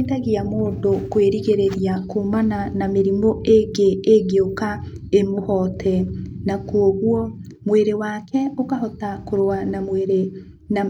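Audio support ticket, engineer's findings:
Speech signal checked end to end: no dropouts, discontinuities, level anomalies or playback-path faults found, nothing to action.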